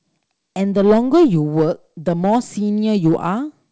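No faults are audible in this speech; the call path sounds as expected, with content stopping at 8 kHz as a G.722-style wideband codec would leave it.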